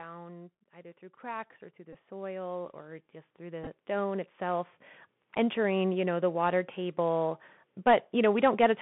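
Throughout, the speech has passed through the Bluetooth CVSD headset codec. The link carries one bit per sample, each saying only whether the waveform steps up or down, with a step size that adapts. The band is held to roughly 150 Hz to 3.5 kHz, so nothing bright survives. Plainly audible damage follows: a granular hiss sits under the speech, s sounds turn scratchy, and loud high-frequency peaks outrun the step size and smear into distortion.

From 0.72 s to 5.88 s the automatic gain is rising. The gain control judged the input too quiet and wound its gain up steadily over more than five seconds, by about 17 dB in total. Voice and background noise swell together until the level settles just before "you know the water".

At 1.93 to 1.95 s comes the first Bluetooth headset packet repeated event. Voice packets between headset and phone were lost and the chip re-decoded the previous packet's bits to fill the gap. 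About 15 ms went missing, which fits four packets at 3.75 ms each. The result is a short buzzy blip with a 267 Hz rasp rather than a clean dropout.

At 3.64 to 3.68 s a second packet repeated event is scattered over about 30 ms. Roughly 19 ms were replaced in total, pointing to five lost packets. The longest unbroken run was only around 10 ms, so the sound is a cluster of small ticks and a brief buzzy grain. It never becomes a sustained tone.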